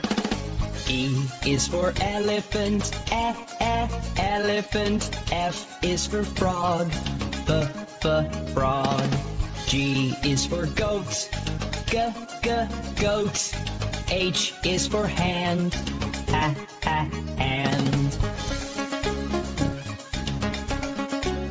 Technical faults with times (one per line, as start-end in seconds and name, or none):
none